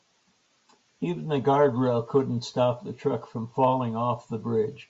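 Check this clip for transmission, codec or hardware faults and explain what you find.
Nothing here points to a transmission, codec or hardware problem; the speech comes across without any fault worth flagging.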